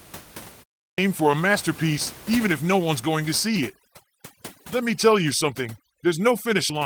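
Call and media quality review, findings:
Clipped start after a pause, 0.89 s: about 92 ms cut from "for a masterpiece even" after 0.33 s silence; output device waking late. Abrupt missing onset, not a fade-in.

Overdone noise removal, 3.48 s to end, after "no one's going to": twinkling specks in near-silent background. Suppressor gating bands too hard, unlike steady codec burble.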